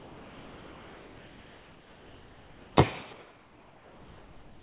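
From 0.0 to 2.77 s and again from 3.13 to 4.61 s, the background turns flat and featureless, about 4 dB quieter: comfort noise in place of the background, likely from discontinuous transmission. On a spectrogram these stretches show smooth, uniform noise with nothing above 4 kHz.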